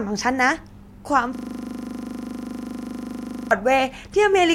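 At 1.35 s the playback system hangs: the computer or its audio driver stops supplying new data, but the sound hardware keeps replaying whatever sits in its ring buffer. The result is a system hang loop running until 3.51 s, with one 40 ms slice of the speech, which fits a 40 ms buffer, repeated exactly 54 times. Cycling at 25 Hz, it comes across as a rapid stutter.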